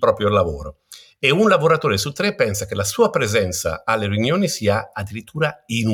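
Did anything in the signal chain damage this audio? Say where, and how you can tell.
No, nothing in this speech recording points to damage at any stage of the signal chain. Listening through gives no sign of a stage that has altered the audio.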